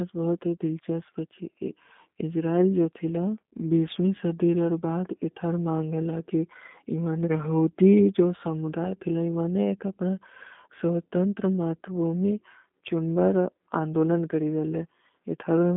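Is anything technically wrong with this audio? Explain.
Yes. Throughout the whole recording, the speech sounds boxed-in and slightly rough, with a buzzy, synthetic edge and no air or sibilant sparkle above roughly 3.6 kHz; the low end thins out below about 200 Hz. This is plainly audible G.729 codec damage, consistent with an 8 kbit/s VoIP link. The codec discards the waveform and rebuilds each 10 ms frame from a vocal-tract filter, a pitch predictor and a few sparse pulses, producing that coarse, telephone-band character.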